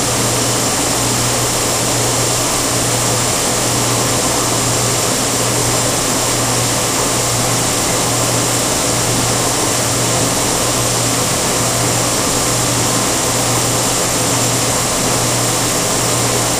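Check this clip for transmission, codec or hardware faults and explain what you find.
Two brief transmission dropouts. Bluetooth stutter at 5.60 to 5.63 s and 10.17 to 10.21 s: the receiver replayed its last buffered slice when data went missing, which fits one lost frame of about 23 ms each time, heard as a short repeated blip before the sound skips ahead.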